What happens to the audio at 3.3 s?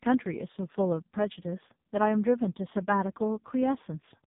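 At 3.3 s the speech carries the sound of an AMR narrowband mobile codec, as it does for the whole clip. Nothing above about 4 kHz survives, so the voice is dull and boxy. The codec rebuilds each 20 ms frame from a vocal-tract model driven by a few pulses. At this heavy level of damage, which fits the lowest AMR-NB mode of about 4.75 kbps, the voice turns buzzy and synthetic.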